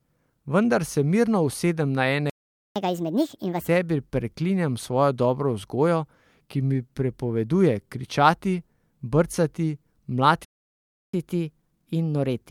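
Right after "mirno usedem na" the speech cuts out at 2.30 s and stays silent until 2.76 s, about 460 ms. That's a playback stall, most likely the player running dry or its thread getting blocked. When it picks up again, you get a catch-up at higher speed: from 2.76 to 3.68 s it's racing at 1.5 times normal, pitched up roughly seven semitones, so it sounds chipmunky while the player burns through the backlog.

The same thing happens again later. There's a longer playback stall from 10.45 to 11.13 s, about 690 ms of dead air, again likely a starved or blocked player. After that comes a milder catch-up from 11.13 s to the end, at 1.1 times speed and a semitone and a half or so sharp.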